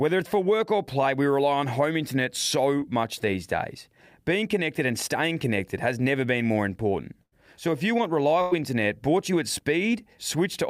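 Packets of this speech recording failed to reach the decoder in time at three points. At 2.79 to 2.83 s, short concealed packet loss left a hole of about 20 ms. The receiver covered it by extending the preceding sound for roughly 17 ms before blending back into the real signal, so the join comes across as a brief smear or wobble, and a very short sound there could disappear. Two bursts of packet loss follow, at 7.23 to 7.34 s and 8.42 to 8.53 s. Each is a longer run of lost or late packets, dropping about 80 ms and 100 ms of audio. In each gap the receiver keeps the last sound going while turning it down, for about 84 ms and 95 ms. The result is a held, fading tail, and the speech then picks up further along with the material in between gone.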